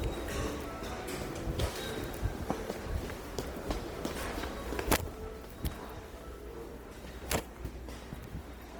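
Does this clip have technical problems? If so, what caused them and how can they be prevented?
Yes. Throughout, the sound turns grainy, rough and noisy while keeping full bandwidth up to about 20 kHz. This likely comes from Opus compression in its music mode, with band energy preserved but detail filled with folded or noise content, consistent with a low bitrate around 24 kbps. To prevent it, encode at a higher Opus bitrate or keep an uncompressed master.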